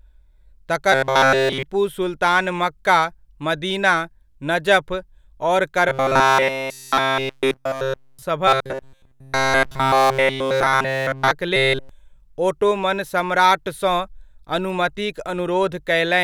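From 0.92 to 1.63 s, 5.89 to 8.22 s, 8.48 to 11.31 s and 11.56 to 11.89 s the speech takes on a robotic sound from repeated short buffers: a rigid, metallic buzz pinned at 133 Hz that loosely tracks the speech. This is likely caused by new audio arriving too slowly, with playback looping a segment of roughly 7.5 ms in its place. Within these spans essentially all of the output is repetition, so the real audio is skipped.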